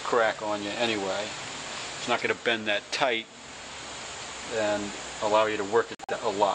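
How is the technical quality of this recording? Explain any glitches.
There's one real glitch, right near the end. At 5.95 s the audio drops into dead silence and stays there until 6.13 s. That's a corrupt frame muted: some compressed frames got bit-flipped, the decoder rejected them, and the player filled the gap with silence. The hole is about 0.18 s, which fits roughly three frames of around 60 ms each. It cuts in abruptly, but the timing holds, so everything after it stays in place.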